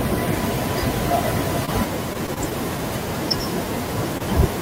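Short concealed packet loss at 1.65 to 1.69 s: about 20 ms of the stream arrived too late for the decoder, so the receiver extended the preceding sound for roughly 17 ms before blending back into the real signal. It is heard as a brief smear or wobble.

Repeated packet loss (robotic sound) follows from 2.13 to 2.53 s. Four separate gaps, the longest 21 ms, were each patched by continuing the last sound. About 14% of that stretch is synthetic fill, which gives it a choppy quality with small pieces missing.

Short concealed packet loss returns at 4.18 to 4.22 s. Again about 20 ms went missing and roughly 23 ms of concealment covered the hole, leaving a short wobble where the audio was stitched back together.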